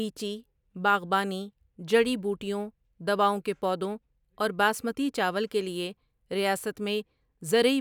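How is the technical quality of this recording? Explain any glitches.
The recording carries one fault running through the whole take: sample clock jitter. The converter's clock wanders by around 2 microseconds, so samples land slightly off time. The timing error turns into noise proportional to waveform slope, roughly 35 dB below the speech, heard as a grainy hiss that swells on loud and sibilant passages and disappears in the pauses.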